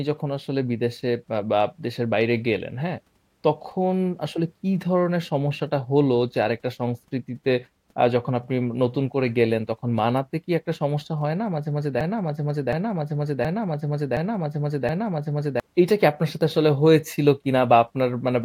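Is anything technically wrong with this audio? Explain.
Yes. From 12.01 to 15.60 s, a broken-record loop: playback likely stalled and resent its last 0.72 s fragment, which repeats five times back to back, replacing the speech that belonged there.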